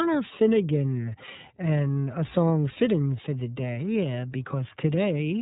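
Throughout the speech, the iLBC codec is coding each short frame on its own at a low rate, consistent with the 13.33 kbps mode and 30 ms frames. Nothing above 3.8 kHz survives, so the sound is muffled and narrowband, with a plainly audible rough, synthetic edge.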